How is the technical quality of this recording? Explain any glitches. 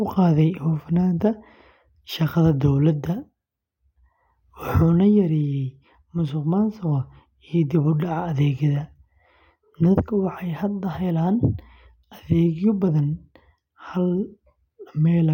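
No technical faults are audible.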